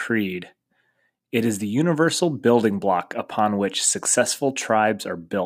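Nothing technical stands out in this short bit of speech; there's no fault to point to anywhere in it.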